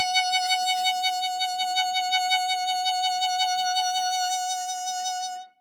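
From start to finish, a noise suppressor built for speech was left running on this music, treating held tones, ambience and reverb as unwanted noise. As sustained parts settle, it pulls them down by about 5 dB, then lets the level back up when a fresh attack arrives. The result is a pumping, fluttering quality: attacks come through, while held notes and decaying tails sag and thin out instead of ringing naturally.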